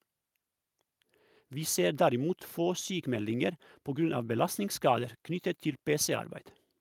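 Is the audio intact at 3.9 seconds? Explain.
Yes, the speech at 3.9 seconds is intact, with no dropout, click, distortion or other fault heard there.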